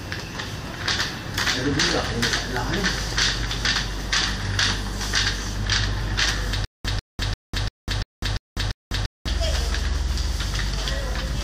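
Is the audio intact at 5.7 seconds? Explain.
Yes, the audio is intact at 5.7 seconds, with no dropout, click, distortion or other fault at that point.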